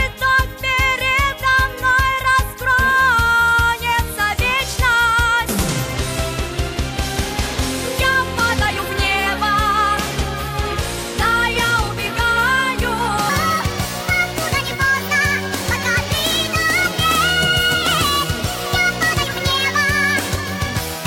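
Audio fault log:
13.29–21.07 s, wrong sample rate: from 13.29 s to the end, the sound abruptly turns higher and hurried, running about 1.38 times faster and raised by about 5.55 semitones, with speed and pitch shifting together. That locked pairing points to the samples being played at a faster clock than they were captured at, with no rate conversion in between. A 1.38 ratio fits 32 kHz material being played out at 44.1 kHz.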